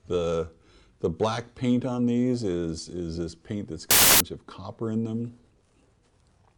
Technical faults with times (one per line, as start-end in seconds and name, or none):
3.91-4.20 samples built from the wrong bytes